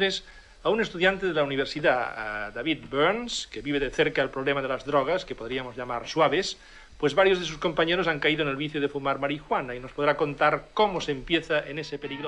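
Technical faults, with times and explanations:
No technical faults can be heard anywhere in this clip. There is nothing in the audio that calls for a time or an explanation.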